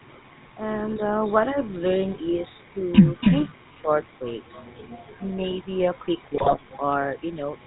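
A speech recording with the GSM full-rate codec throughout. Plainly audible damage: a buzzy, gravelly roughness and nothing above 4 kHz. That fits 13 kbps GSM full rate. GSM bit errors hit from 6.34 to 6.56 s. The speech breaks into squawks and gargling. Corrupted filter, pitch and gain values distort each frame's spectrum and level.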